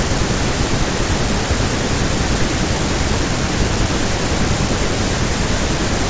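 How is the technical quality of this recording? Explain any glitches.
No glitches are audible anywhere in the recording, so there is nothing to explain.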